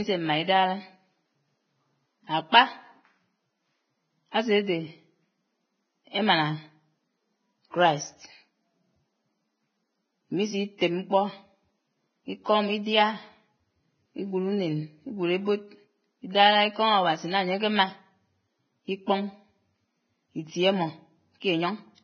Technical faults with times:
0.00-22.03 Vorbis compression
10.78-10.81 pre-echo

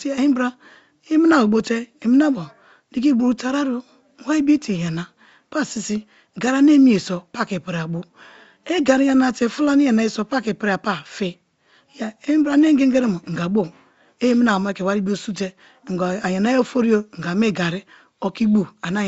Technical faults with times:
none

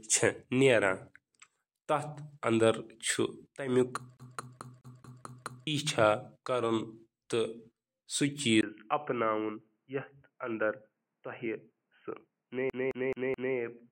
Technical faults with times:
4.17-5.67 CD stuck on one turn
8.61-13.91 input switched to a poorer device
12.70-13.56 CD stuck on one turn

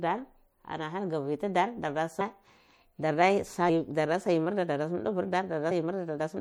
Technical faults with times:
0.00-6.41 MP3 compression
2.20 compressed frames skipped
3.69 compressed frames skipped
5.70 compressed frames skipped

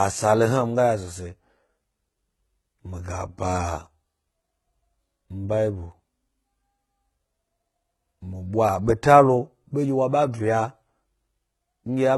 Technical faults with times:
0.00-12.17 HE-AAC compression

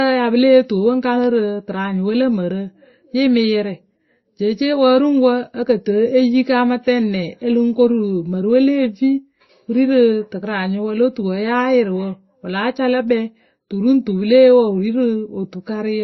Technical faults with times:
0.00-16.04 transcoding between lossy codecs

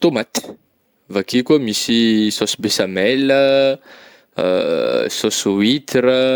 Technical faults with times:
none

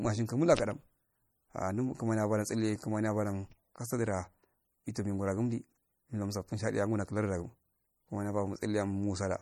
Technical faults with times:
0.00-9.41 MP3 compression

